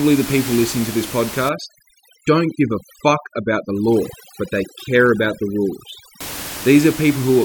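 From 1.49 s to 6.21 s the speech goes through overdone noise removal: a noise reducer set far too aggressively pulls individual frequency bands down to nothing whenever they sit close to its noise estimate. The room noise, about 12 dB below the speech before 1.49 s, collapses into near silence with twinkling specks. A spectrogram shows scattered isolated dots in the gaps and ragged, hollowed-out harmonics.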